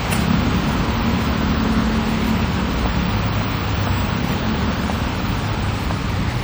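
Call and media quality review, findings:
Generation loss, whole clip: swirly, hollow texture with smeared attacks on the everyday sounds. Likely several MP3 re-encodes at around 64 kbit/s; each pass requantises on a shifted frame grid, so noise and spectral holes stack up.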